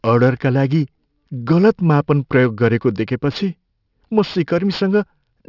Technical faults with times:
0.00-5.49 aliasing

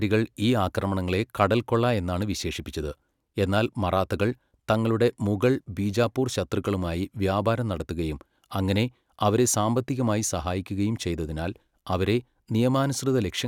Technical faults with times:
none

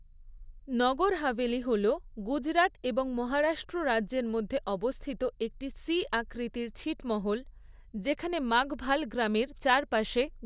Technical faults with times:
none

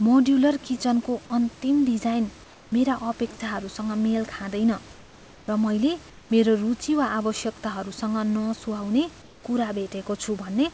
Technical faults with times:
2.44-2.72 comfort noise in place of the background
4.92-5.48 comfort noise in place of the background
6.10-6.30 comfort noise in place of the background
9.22-9.44 comfort noise in place of the background

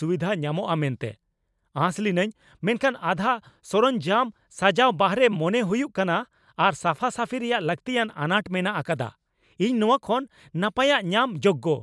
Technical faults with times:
none

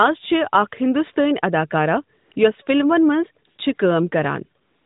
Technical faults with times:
2.18-2.36 AMR comfort noise
3.46-3.78 AMR comfort noise
4.62-4.85 AMR comfort noise

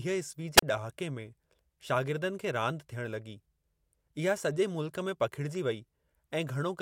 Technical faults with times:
0.57-0.62 wireless microphone squelch dropout

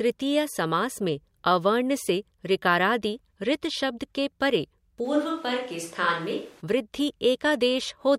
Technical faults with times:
5.06-6.60 switch to a distant microphone

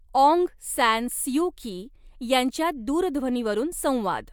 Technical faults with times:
none

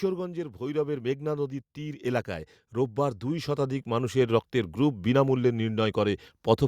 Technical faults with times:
0.58-5.90 automatic gain rising

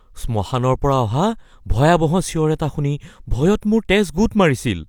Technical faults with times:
none

